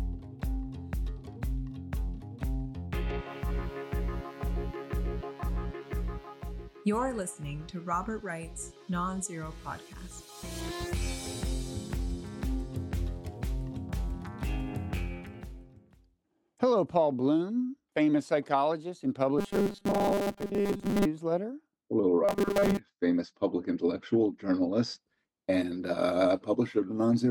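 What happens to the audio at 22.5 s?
At 22.5 s you're in a short stretch, 22.25 to 22.79 s, of robotic sound from repeated short buffers: a rigid, metallic buzz at 200 Hz. It's likely playback looping the last 5 ms chunk when new audio arrived late, skipping most of the real sound.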